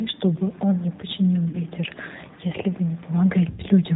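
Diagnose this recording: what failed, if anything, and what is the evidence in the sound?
The fault is in the codec stage. The G.729 codec runs throughout at 8 kbit/s. Nothing above 4 kHz survives. The speech sounds rough and synthetic the whole way. The decoder rebuilds it from a vocal tract filter, a pitch predictor and a few pulses per frame.

The fault is in the network stage, with VoIP packet loss concealed by the speech codec. It happens at 1.49 to 1.60 s and at 3.50 to 3.62 s. The losses are 40 ms and 80 ms, which fits two and four lost packets. The decoder stretches its last pitch and filter into a buzzy tone or coloured noise that fades. The voice then stays weak or distorted until the frames rebuild.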